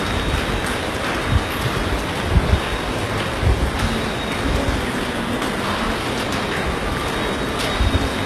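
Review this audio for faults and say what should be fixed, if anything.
Likely HE-AAC compression throughout: the upper spectrum was rebuilt by copying lower bands upward, which fits HE-AAC v2 at roughly 16 kbps. Across the whole clip the treble sounds gritty and metallic, heavily damaged, with nothing above 12.3 kHz. To prevent it, encode at a substantially higher bitrate or with a full-band codec.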